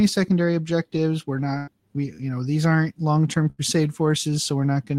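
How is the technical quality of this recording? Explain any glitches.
The recording has two dropouts, both a burst of packet loss, at 1.57 to 1.70 s and 3.50 to 3.61 s. Consecutive packets went missing, so the receiver stretched the last sound and faded it for about 98 ms and 83 ms. The speech then resumes with roughly 60 ms skipped each time.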